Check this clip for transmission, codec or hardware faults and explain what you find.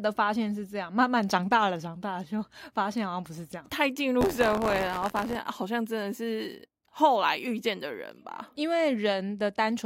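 One hardware fault is present. From 4.20 to 5.36 s there is buffer tearing: the writer and the hardware read pointer have drifted into each other. About a tenth of each buffer repeats audio from roughly 20 ms earlier, giving a rattling 86.1 Hz buzz over the speech, which fits a 512-sample buffer.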